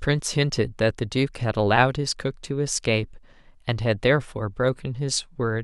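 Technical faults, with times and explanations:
Nothing technical stands out here; no dropouts, glitches or other faults turn up anywhere in the recording.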